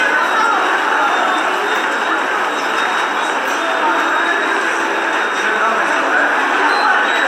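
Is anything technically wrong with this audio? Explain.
Yes. Throughout the clip there is generation loss: the audio was likely decoded and re-encoded with MP3 around five times, at what sounds like 96 kbit/s. Each pass requantised the signal on a shifted frame grid, so coding noise and spectral gaps stacked up. The result is swirly, smeared and hollow, worse than a single encode at that rate would give, with blurred attacks and nothing above 17.7 kHz.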